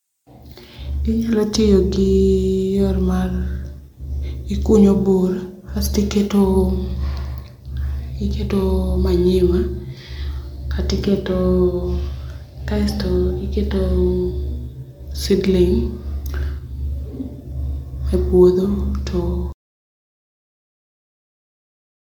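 From the start, the speech carries generation loss: it sounds swirly, smeared and hollow, with consonant attacks blurred and a watery quality that a single encode at this quality would not produce. The likely cause is repeated MP3 decoding and re-encoding, around seven passes, each quantising on a shifted frame grid so that noise and spectral holes pile up. The character fits a 128 kbit/s chain, with content extending up to about 20.1 kHz.

At 19.53 s the audio drops out to silence and stays silent through to the end. The gap is silent with no room tone or noise floor, which sets it apart from a pause in the speech. The likely cause is a loss of input, such as a disconnected device, a failed link or an accidental mute, while the recorder kept writing silence. Whatever followed that point is missing.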